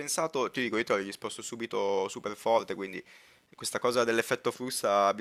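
Speech with computer activity noise throughout. A faint buzz pulses around 150 times a second, about 40 dB below the voice. Load changes of the processor, graphics card or mouse disturb the shared ground.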